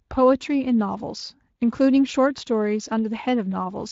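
No technical faults can be heard in this speech.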